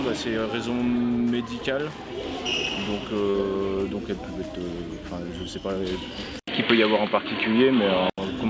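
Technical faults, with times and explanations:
3.30 s: short concealed packet loss. About 40 ms of the call failed to reach the decoder in time, and the receiver covered the gap by extending the preceding sound, pitched continuation where it was voiced and shaped noise where it was not, before crossfading back into the real stream. The result is a brief smear or wobble at that point, short enough that a consonant-sized element could be swallowed, heard over a G.722 call path whose band already stops at 8 kHz.
6.39 to 8.18 s: input switched to a poorer device, likely the system changing microphones or moving to a headset call profile mid-recording. The sound drops out for about 80 ms, then returns noticeably duller, with nothing above about 4.5 kHz, a level shift of roughly 5 dB, and a new background noise sitting roughly 50 dB below the signal. The narrower band and changed tone and level hold until 8.18 s.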